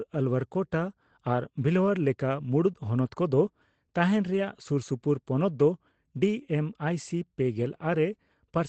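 Speech with a lost packet rebuilt from error correction at 0.39 s, just before "ᱠᱳᱴᱟ ᱟᱨ ᱵᱷᱤᱞᱚᱣᱟᱭᱟᱨ", at 2.03–2.05 s right after it, at 4.33–4.35 s, and at 7.55–7.61 s. These are brief rough, noisier patches of about 20 ms, and 40 ms at the last. Each is a low-bitrate backup copy carried in the next packet, not a gap or a smeared repeat from plain concealment.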